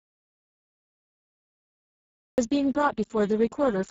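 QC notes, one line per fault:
Throughout: Speex codec. Speech sounds hoarse, buzzy and close to robotic, which fits a very low Speex setting near 6 kbps that leaves almost no bits for the excitation. A spectrogram shows blurred, noise-like harmonics, smeared upper bands and nothing above 7.6 kHz.
0.00–2.38 s: audio dropout to silence. The clip opens already in a gap of total silence, with no room tone, and speech starts abruptly at 2.38 s. The input was likely lost, leaving silence. The waveform is a flat line, and the spectrogram is empty until the onset.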